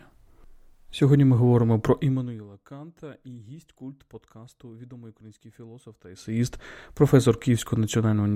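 At 1.94 to 2.47 s, after "ми говоримо", the level drops about 25 dB in coarse unsmoothed steps, roughly 400 a second, causing zipper noise, a fine buzzy ticking. After "подкасту відомий український філософ", 6.08 to 6.43 s, a similar rise brings it back.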